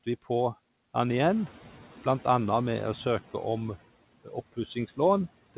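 At 1.07 s the room noise jumps by about 11 dB, and the noise suppressor is caught out: for roughly 2.1 s, until 3.19 s, it is catching up. Its noise estimate still reflects the quieter background, so the new noise passes with little reduction at first, then sinks by about 7 dB as the estimate adapts. On a spectrogram the broadband noise floor between speech bands, capped at 4 kHz by the narrowband call path, starts bright and fades over those two seconds.

From 4.24 to 4.33 s, speech is cut by the noise suppressor. The suppressor misreads a stretch of speech as background, treating roughly 100 ms as noise and pulling it down by as much as about 14 dB. The result sounds swallowed, as if that bit of the utterance slipped out of reach. A waveform shows a brief dip in the envelope there, and on a spectrogram the speech harmonics and consonant energy thin abruptly before recovering.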